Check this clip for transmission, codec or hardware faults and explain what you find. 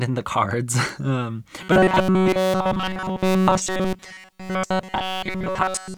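Two faults are present, a single spike and then a robotic buzz that persists to the end.

At 0.89 s an electrical switching spike, likely from a nearby switch arcing, gives a sharp snap, seen as a thin vertical line on the spectrogram.

From 1.62 s to the end, robotic sound from repeated short buffers, likely a starved stream looping about 5.3 ms chunks, imposes a rigid 188 Hz metallic buzz throughout, visible as evenly spaced horizontal harmonics.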